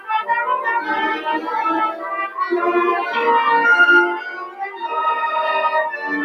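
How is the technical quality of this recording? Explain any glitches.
The recording has been run through a noise suppressor designed for speech, and it is working against this material throughout. It mistakes sustained tones, ambience and decay for noise and pulls them down, so the level swings by around 10 dB as its gain chases the signal. Onsets pass, while held sound and tails sag, giving a pumping, fluttering, thinned character. On a waveform the envelope breathes unevenly, and a spectrogram shows sustained bands fading and returning.

Three stretches are cut harder by the noise suppressor. From 1.18 to 1.5 s the level sinks by up to about 9 dB, and from 1.92 to 2.12 s by up to about 8 dB, each lasting roughly a fifth of a second. The deepest cut runs from 4.25 to 4.86 s, reaching about 12 dB for well over half a second. There the sustained material audibly hollows out. On a spectrogram these show as dimmed patches and tails that stop abruptly.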